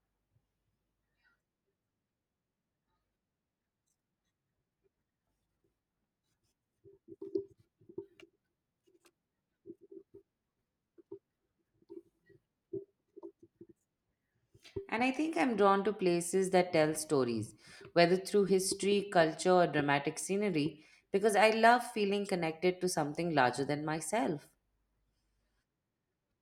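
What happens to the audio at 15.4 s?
Nothing goes wrong at 15.4 s; the speech there plays through intact, with no dropout, click or other fault.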